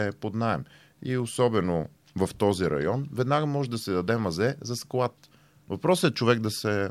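No technical faults are audible anywhere in this speech recording.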